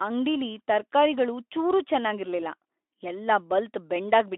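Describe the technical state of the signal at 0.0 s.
At 0.0 s the speech is intact, with no fault at that moment.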